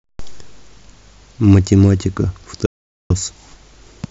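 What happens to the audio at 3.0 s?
At 3.0 s the speech has cut out to dead silence, with no room tone at all, part of an audio dropout to silence running from 2.66 to 3.10 s. About 0.44 s of speech is lost, most likely because the input briefly disconnected while zeros kept being written.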